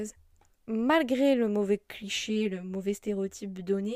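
From 2.02 s to the end of the speech, channel delay (comb filtering) sets in: one channel arrives roughly 10 ms late, and summing to mono cancels frequencies from about 50 Hz upward at even spacing. The hollow, phasey colour stays fixed, unlike a flanger's sweeping notches.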